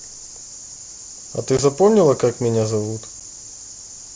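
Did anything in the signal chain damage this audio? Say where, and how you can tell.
Yes. The Bluetooth headset link shows unconcealed packet loss: abrupt holes of about 15 ms at 1.57 s and 7.5 ms at 3.20 s, which fit two frames and one lost frame. Lost mSBC frames became silence or an idle pattern with hard edges. Packet-loss concealment would have filled them smoothly.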